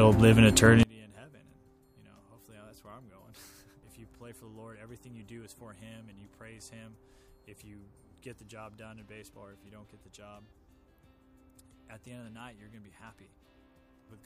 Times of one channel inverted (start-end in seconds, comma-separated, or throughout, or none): 0.83-14.26